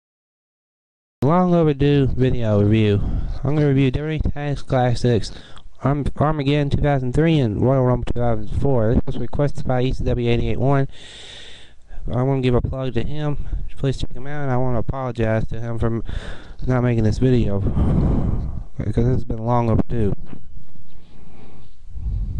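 The audio has a cut-off start. It opens on silence that lasts until 1.23 s. At that point the sound begins abruptly, partway through an event that was already underway, with no natural attack and no fade-in to introduce it. The most direct explanation is that the recording or stream started late, so capture began after the sound had started and its true onset was never captured, leaving only the continuation.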